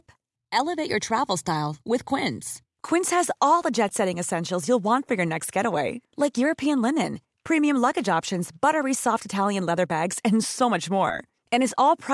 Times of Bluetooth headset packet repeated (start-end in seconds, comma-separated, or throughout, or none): none